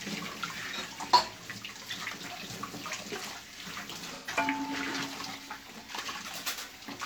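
From 4.15 to 4.35 s there is AAC frame loss with concealment. Part of the coded stream went missing, about 128 ms of audio, which fits roughly three AAC frames. The decoder patched the gap by reusing the last good spectrum, so the sound turns briefly smeared and phasey instead of dropping out. On a spectrogram the patch appears as a blurred, static band with little frame-to-frame change. The waveform shows a short stretch of noise-like texture.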